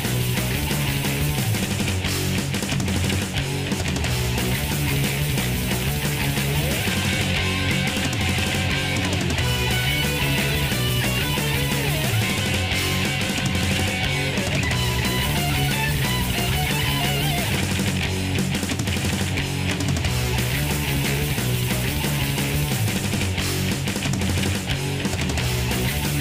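No technical faults are audible.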